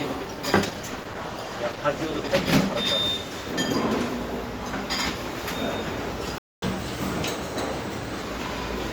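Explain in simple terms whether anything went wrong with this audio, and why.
A call bitrate drop runs from 0.67 to 3.01 s. The connection's estimate of available bandwidth fell, so the encoder had fewer bits to describe the sound. For about two seconds the audio turns coarse and muffled, losing its crisp top end, before clarity returns.

A playback stall hits at 6.38 s. The sound cuts out mid-flow for about 0.24 s, then resumes at 6.62 s. The likely cause is that the player ran out of audio data and had nothing to output until more arrived.

Catch-up at higher speed follows from 6.62 to 8.22 s. To recover the time lost in the gap, the player runs its backlog 1.15 times faster. The sound is hurried and raised by roughly two semitones, then settles back to normal.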